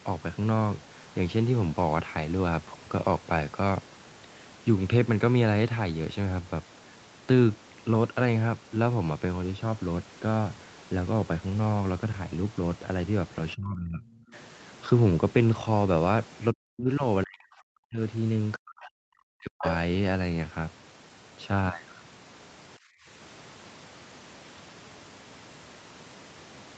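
From 13.55 to 14.33 s, 16.53 to 17.03 s, 17.24 to 18.00 s and 18.55 to 19.64 s the talker's speech sinks by about 20 dB and then by about 40 dB. This is likely speech suppressed in double talk, with the echo canceller ducking the talker, not a network dropout. At 19.58 to 19.70 s a second voice, only about 5 dB below the talker, comes through as a brief scrap. That is the other side's voice leaking through, and it is likely residual loudspeaker echo, not crosstalk. From 22.78 to 23.07 s, about a third of a second, the background gated by the echo canceller drops by about 26 dB and then returns. The room tone dips, not the speech, against an 8 kHz call bandwidth.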